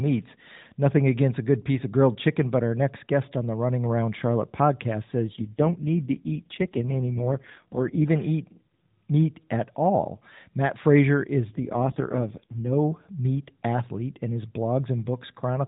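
AMR rate drop at 5.34 to 8.08 s, just after "podcast says", and again at 11.50 to 12.75 s: in this narrowband mobile speech recording, the voice turns buzzier and more synthetic without any gap or band change, which points to the codec stepping down from about 12.2 to 4.75 kbps on a weak link.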